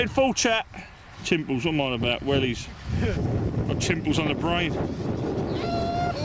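Nothing goes wrong anywhere in the clip, and the only thing worth noting is that the sound sits within a call-style band with nothing above about 8 kHz, just what you'd expect from a wideband codec like G.722 on a normal call path.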